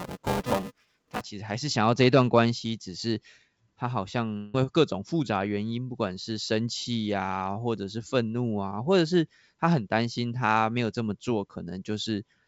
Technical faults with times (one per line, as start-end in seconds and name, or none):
0.00-1.21 buffer tearing
4.37-4.55 long network dropout